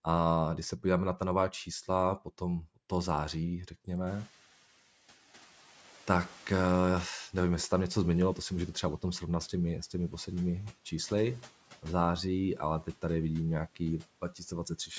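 From 4.06 s the noise suppressor is catching up. Room noise that jumps by around 20 dB breaks through, then fades about 8 dB by 8.81 s, showing on a spectrogram as a broadband haze that thins out.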